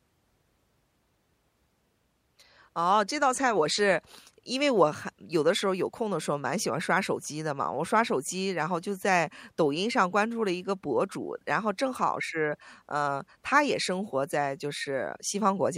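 No technical faults can be heard anywhere in the recording; the speech signal stays intact and continuous throughout.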